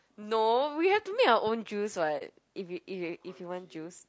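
Throughout the clip the speech is rough and grainy, with noise filling the gaps between harmonics and a thin, synthetic-sounding top band. This plainly audible damage is likely from low-delay AAC compression (AAC-ELD), whose short frames resolve pitch poorly, and it fits a bitrate of around 32 kbps.

From 2.18 to 2.22 s there is a brief dip where the sound fades out and back in. This is AAC frame loss with muting: the decoder zeroed the missing spectrum, and the overlapping windows soften both edges, consistent with one lost frame.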